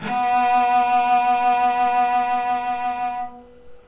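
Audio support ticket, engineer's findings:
No faults found; the audio has nothing above 4 kHz with the coding noise of the call path, which fits narrowband G.711 A-law at 64 kbps and is expected behaviour.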